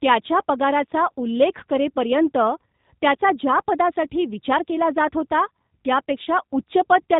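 The speech runs through the G.729 codec the whole way, with plainly audible damage: nothing above 4 kHz, and a rough, slightly synthetic texture from a sparse pulse excitation. That model-based roughness, rather than the smeared, swirly highs of a transform codec, points to an 8 kbit/s CELP speech codec. At 4.71 to 4.75 s there is VoIP packet loss concealed by the speech codec. A brief, fading extension of the preceding sound replaces the gap, which fits a single lost 10 ms frame. The voice stays weakened briefly afterwards, unlike the silence or click of a plain dropout.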